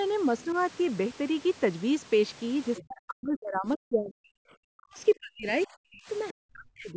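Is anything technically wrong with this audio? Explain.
Yes, there are two problems.

Other side's voice leaking through occurs at 0.39–0.44 s, 2.77–2.85 s and 6.29–6.33 s. The likely cause is a far-end voice played on the talker's loudspeaker, picked up by the microphone, and only partly removed by the echo canceller. Each leak is a brief, faint scrap of a second voice, sitting far below the main talker. The one near 2.8 s is the most noticeable.

Speech suppressed in double talk affects 2.8–4.54 s, 4.74–4.99 s, 5.15–5.48 s, 5.66–6.08 s, and 6.33 s to the end. With both sides talking at once, the echo canceller likely could not separate the talker from the loudspeaker echo, so it pulled the whole signal down. The talker's voice drops sharply, by roughly 40 dB at its deepest. The longest stretch runs for well over a second.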